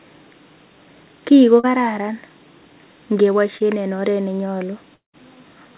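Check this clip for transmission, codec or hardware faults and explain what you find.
Yes, there are three network faults in this speech, heard over a call path that tops out at 4 kHz, which fits G.711 mu-law.

Short concealed packet loss hits at 1.60 to 1.65 s and 3.57 to 3.62 s. A few hundredths of a second arrived too late, so the decoder stretched the previous sound for roughly 30 ms and blended back, leaving a brief smear or wobble.

The long network dropout runs from 4.94 to 5.15 s. The sound continues as a fading buzz for a moment, then goes silent for about 140 ms before speech resumes with a piece missing. The likely cause is a stall where nothing reached the receiver.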